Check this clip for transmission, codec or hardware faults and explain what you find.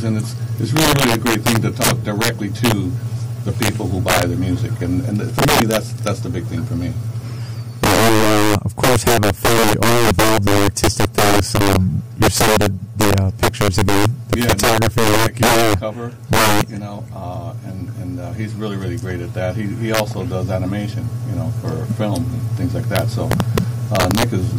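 Violent, sharp cracks break out across the whole clip whenever the sound gets loud, harsher and more abrupt than ordinary clipping. This is integer overflow: the signal is driven roughly 7 dB past the top of the integer range, and instead of being held at the limit, each peak that exceeds it wraps around to the opposite extreme. A few percent of samples are affected, and every one jumps across the full range, producing those sudden cracks on the loudest passages.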